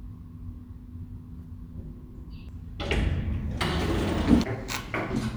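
At 2.49 s and again at 4.44 s the audio breaks with a brief glitch, a chirp, squawk, click or short hole, the signature of damaged data in a compressed stream. At each point a stretch of the encoded bitstream has been corrupted, so the decoder cannot interpret the affected frame, loses its lock on the frame structure, and resynchronises at the next valid header. The glitch is what's heard while the decoder is out of sync.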